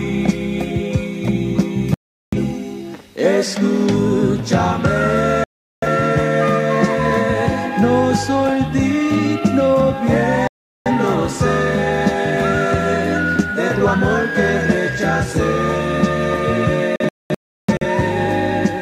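Digital broadcast dropouts cut the sound four times. At 1.94 s, 5.44 s and 10.48 s it mutes for about 0.38 s, then returns. Each gap fits roughly nine lost frames. The receiver stopped getting clean data and muted until good frames arrived. At 16.96 s the loss is broken up. Several short holes spread over 0.85 s, about 0.64 s missing in total. The longest is 0.34 s. Anything sent during the holes is gone.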